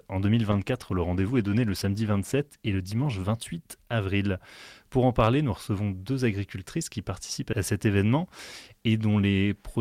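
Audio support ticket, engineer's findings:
Call bitrate drop, 0.53 to 4.65 s. Audio turns coarse and watery, high end dulled; worst stretch lasts about 2.6 s before recovery. Probable component: sender's bandwidth estimator driving the Opus encoder. Mechanism: estimate collapse forces a much lower target rate, roughly a fall from 64 to 16 kbps by the sound of it. Coarser quantisation plus high-frequency cutoff until the estimate climbs back.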